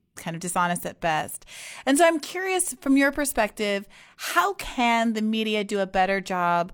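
Nothing stood out on listening to this recording.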